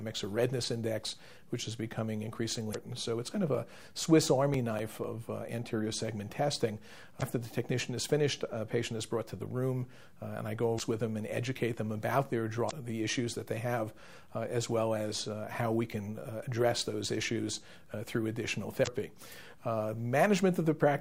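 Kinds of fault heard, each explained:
Damaged data in a compressed stream: corrupted frames make the decoder lose sync, heard as five brief glitches of about 40 ms, at 2.71, 7.18, 10.76, 12.67 and 18.83 s.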